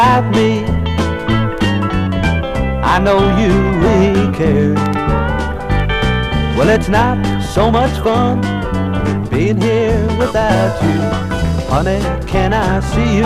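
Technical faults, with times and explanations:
Throughout, hard clipping: the signal is driven about 8 dB past what the chain can pass, so a few percent of peaks are sheared flat, giving crackly, gritty edges on loud moments.
6.91 to 8.43 s and 9.13 to 10.39 s, jitter buffer speed-up: the receiver trims roughly a tenth of a second each time, snipping tiny pitch-period chunks, so the audio rushes along 6 and then 8 percent fast without any pitch change.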